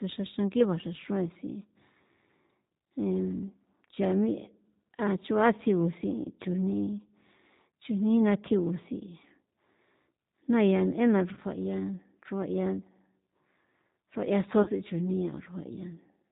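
G.729 codec coding runs throughout the speech, with plainly audible damage. The decoder rebuilds each 10 ms frame from a vocal tract filter, a pitch predictor and a few pulses, so nothing above 4 kHz survives and the voice sounds rough and slightly synthetic, which fits an 8 kbit/s G.729A stream.

VoIP packet loss concealed by the speech codec occurs at 11.34 to 11.39 s and again at 14.63 to 14.70 s. Each dropout points to a single lost 30 ms packet. The decoder filled each gap by extending its last pitch and filter at falling gain, so the sound smears into a brief buzzy tone or coloured noise that fades. The voice stays weak or distorted for a moment after each gap.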